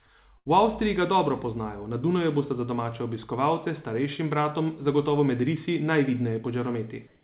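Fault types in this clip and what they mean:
Burst of packet loss: at 0.38 to 0.47 s, lost packets were bridged by 73 ms of fading continued sound, then speech resumes with 80 ms missing.
Comfort noise in place of the background: from 7.07 to 7.23 s, the real background becomes 160 ms of steady, featureless noise, about 1 dB different, likely synthetic comfort noise filling a pause.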